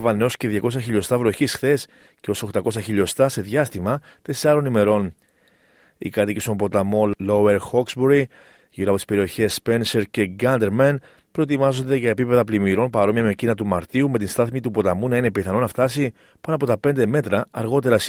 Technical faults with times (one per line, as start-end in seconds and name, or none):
none